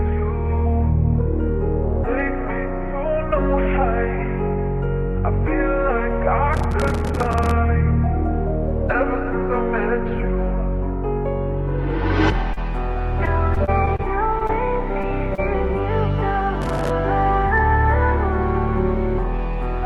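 A gritty burst of crackle tears across the audio from 6.54 to 7.51 s, and a shorter one returns from 16.62 to 16.90 s. This is processor overload crackle. The machine could not finish its very short audio buffers, each a few milliseconds long, before their deadlines. Dozens of deadlines were missed in a row, each one dropping a sliver of silence with hard edges. That run of tiny gaps is heard as rough tearing that stops once the load eases.

Brief smears appear at 12.53, 14.39, 14.47, 15.01 and 15.35 s. These are short concealed packet loss. Each time, about 20 to 40 ms of the call arrived too late for the decoder. The receiver covered the hole by extending the preceding sound, with filler lasting roughly 10 to 30 ms, then blended back into the real signal. Each patch leaves a small blur where the original detail was.

Between 13.25 and 14.01 s the audio turns choppy, with pieces missing. 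This is repeated packet loss, giving a robotic sound. Five separate gaps fall inside this stretch, together about 100 ms missing and none longer than about 30 ms. Each gap is patched before the next one arrives, so around 12% of that span is synthetic filler stitched between real fragments.

All of this passed through a call path whose top end stops near 12 kHz, which fits Opus at about 32 kbps.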